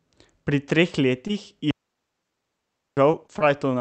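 At 1.27 to 1.31 s a brief smear passes through the speech, a short concealed packet loss. About 20 ms of audio never arrived in time, and the receiver covered it by extending the preceding sound before blending back into the real signal.

From 1.71 to 2.97 s the sound drops into a clean hole of near silence lasting about 1.2 s, with no noise burst either side. This is a digital wireless dropout: the link lost too much data and the receiver muted with a very short fade.

The same short concealed packet loss then recurs three times in quick succession, at 3.12 to 3.15 s, 3.27 to 3.31 s and 3.39 to 3.42 s. Each is a small smear or wobble where roughly 20 ms went missing and was patched over with continued sound.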